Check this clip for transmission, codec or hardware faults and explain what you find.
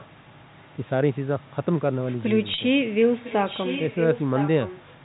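Two kinds of fault are present: echo leak, heard twice, and one packet loss with pitch repetition.

Echo leak, 0.0 to 0.1 s and 3.12 to 4.81 s: a copy of the speech returns about 1.0 s late. It is likely from a loudspeaker on the far side whose echo canceller let some of the microphone signal through. The first stretch is faint, roughly 30 dB down, and the second is much stronger, about 10 dB below the speech.

Packet loss with pitch repetition, 2.54 to 2.58 s: about 40 ms of audio went missing, which fits two 20 ms packets. The receiver filled the gap by repeating the last pitch period, so the sound briefly holds with a slightly buzzy, static quality.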